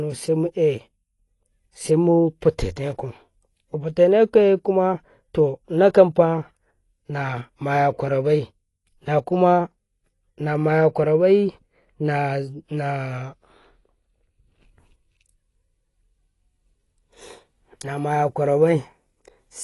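Throughout the speech, the sound is dull and smeared, with nothing above 11.5 kHz and a warbling, fizzy texture on sibilants and held sounds. This is likely AAC compression at a low bitrate, around 32 kbps, quantising the spectrum coarsely and leaving gaps.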